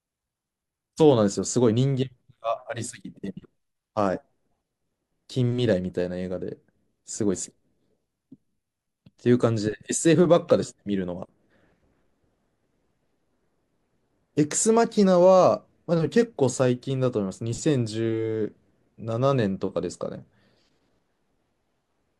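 No technical faults are audible anywhere in the speech recording.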